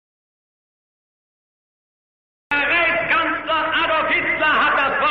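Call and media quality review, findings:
Audio dropout to silence, 0.00–2.51 s, already under way when the clip opens: silence, no room tone, sound enters mid-flow at 2.51 s. Input side, likely a lost capture device, failed link or stray mute while the encoder kept writing samples.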